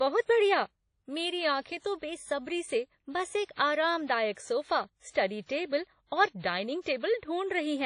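WMA compression, heard across the whole clip, gives the speech a washy, ringing quality, with a hiss that swells and fades along with the speech and nothing at all above 10.1 kHz. The cause is likely a low-rate transform codec, in keeping with a rate near 32 kbps. Coarse quantisation smears noise across each long block, and the weakest spectral lines are dropped entirely, leaving a hollow, swirling texture.

Pre-echo appears from 5.10 to 5.15 s, as a brief hiss rising just ahead of a sharp onset in the speech and softening its attack. The loud attack sat late within a transform block. The noise budget sized for that loud moment was spread evenly over the whole block, so it also filled the quiet stretch before it, smearing about 49 ms of noise in front of the onset.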